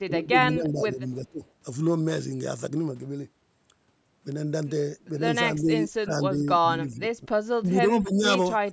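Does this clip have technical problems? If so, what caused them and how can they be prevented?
Yes. The speech dips in bursts at 0.06–0.36, 0.54–1.0, 1.23–1.43, 5.81–6.14, 6.38–6.63, 6.8–7.28, 7.6–7.76 and 8.02–8.24 s, from roughly 10 dB down to nearly 30 dB down. This is likely speech suppressed in double talk: the echo canceller mistook the near talker for loudspeaker echo and attenuated it. Using a headset or a canceller with better double-talk detection prevents this.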